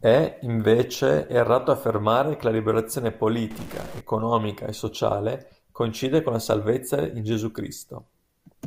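From 3.51 to 4.01 s, right after "affermare che la liberazione", the speech turns harsh and buzzy, with a gritty noise floor. This is a stuck bit, likely from a faulty converter or data line, which adds an error step of about -35 dBFS to roughly half the samples.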